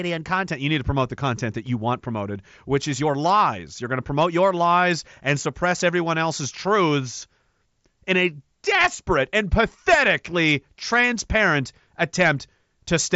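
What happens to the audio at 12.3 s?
At 12.3 s the speech carries on intact, with no dropout, glitch or other fault at that moment.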